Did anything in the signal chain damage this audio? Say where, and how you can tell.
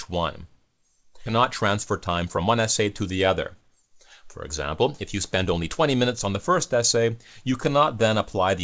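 Yes. The damage is in the network and jitter-buffer stage. At about 1.26 to 1.38 s there is a skip ahead: playback jumps forward with no gap, and around a second of sound is gone. A stretch was dropped while newer audio waited, and the two sides were spliced almost directly. On a waveform the envelope changes abruptly at the joint, and a spectrogram shows harmonic tracks breaking off and restarting somewhere unrelated.

The same buffer then applied a jitter buffer speed-up twice: from 2.07 to 4.83 s the sound runs about 9% fast, trimming roughly a third of a second, and from 5.35 to 7.11 s about 6% fast, trimming about a tenth of a second. The receiver was draining excess delay by cutting out one or a few pitch periods repeatedly, so timing hurries while pitch stays put. On a spectrogram the harmonic lines keep their spacing while events crowd closer together. The waveform shows periods quietly missing, and the spectrogram shows the G.722 band edge at 8 kHz throughout.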